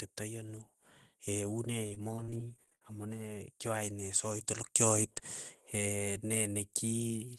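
Repeated packet loss (robotic sound) runs from 1.86 to 2.82 s. Over this stretch of speech, audio packets went missing again and again, each hole bridged by extending the last sound heard before it. The patches come in quick succession, the longest about 59 ms, and together fill roughly a quarter of the span. The result is choppy speech with fragments missing, heard through a call codec whose top end stops near 12 kHz.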